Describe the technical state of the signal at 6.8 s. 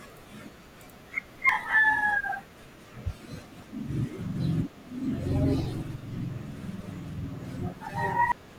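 At 6.8 s the speech signal is intact, with no audible fault at that moment.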